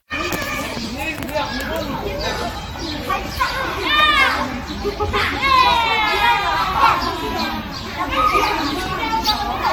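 Generation loss runs through the whole recording of everyday sound. It sounds swirly, smeared and hollow, and attacks blur. Nothing sits above 19.3 kHz. The likely cause is repeated AAC encoding, about ten passes, which fits a 96 kbit/s setting.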